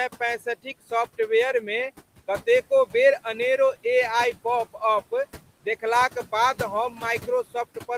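Speech, with noise suppressor artifacts running through the whole clip. The suppressor pulls down each frequency band it judges to be steady noise, frame by frame, by about 15 dB. The room noise, which sits about 19 dB below the speech, drops away in the gaps and returns under the talking. That pumping is audible throughout.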